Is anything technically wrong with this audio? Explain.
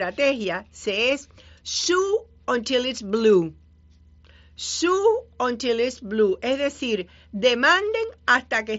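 No, nothing technically wrong here: the speech comes over what sounds like a wideband Bluetooth headset link using the mSBC codec, with nothing above about 7.7 kHz, which is just how that path normally sounds.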